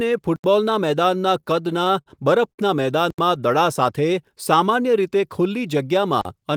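Right at 0.36 s the speech drops into a block of digital silence lasting 80 ms, until 0.44 s. A stretch of samples came out silent, probably because the output buffer wasn't filled in time. It cuts in and out with no fade, leaving a short hole. From 1.29 to 2.08 s there are repeated stalls, a stutter: packets kept showing up late, the jitter buffer ran dry seven times, and the receiver held the last sound for about 120 ms in total, never more than 49 ms at once. Nothing goes missing, but the speech drags and hiccups. At 2.52 s a single short stall from a late packet stretches the sound by 59 ms before it picks up where it left off, so one sound hangs on with a slight buzz or dip. The digital silence comes back at 3.10 s for another 80 ms, and again at 6.21 s for 40 ms, each one a little dropout.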